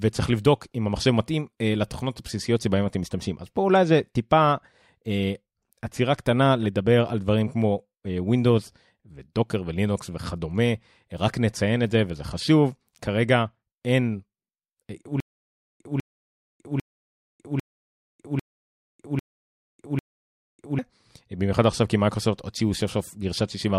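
Stutter with silent gaps, 15.20 to 20.79 s: a 198 ms fragment of speech repeats seven times, each followed by 600 ms of digital silence, in a steady 798 ms cycle. The stream likely stalled, replaying its last fragment at each retry, so the speech due there is lost.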